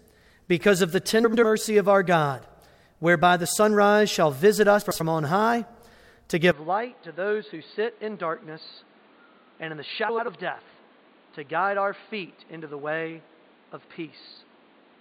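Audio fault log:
1.24–1.44 s, 4.82–5.01 s, 10.09–10.28 s: frames out of order. Each stretch plays two adjacent blocks of about 93 ms in swapped order, giving a garbled flutter. Unlike a dropout, nothing is missing.
6.52 s to end: input switched to a poorer device (likely). Nothing above 4.6 kHz, level about 10 dB lower, and a new noise floor about 30 dB down appear at once with no gap. A plain filter would not change the noise.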